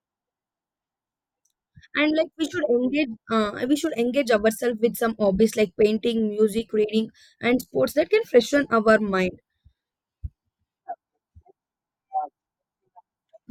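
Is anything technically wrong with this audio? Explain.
No, there's nothing technically wrong with this audio.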